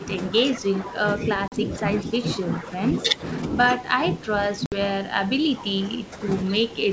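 It's a speech recording from a wideband call, clean up to about 7 kHz in a way that fits G.722 at 64 kbit/s. The main problem is speech suppressed in double talk. The level dips by about 10 to 15 dB over 0.00–0.09, 0.31–1.84, 2.02–3.23, 3.75–6.27 and 6.44–6.92 s, likely because the echo canceller couldn't tell the talker from loudspeaker echo while the far side was also talking, so it pulled everything down. There's also a short echo leak at 0.54–0.58 and 2.32–2.37 s: a faint copy about 20 dB down, trailing by 182 ms, likely where the far end's canceller let some of its loudspeaker pickup through. Finally, packet loss on an ADPCM call punches hard-edged holes of 40 ms at 1.48–1.54 s and 60 ms at 4.66–4.74 s, which fits two and three lost packets. Right after each gap the decoder's predictor and step size are out of step, so the speech comes back slightly distorted before it settles.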